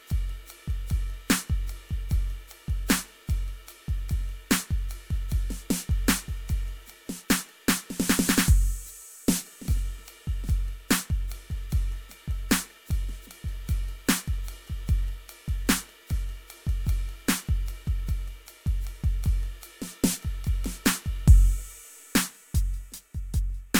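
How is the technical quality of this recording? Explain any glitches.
No technical faults are audible in this music.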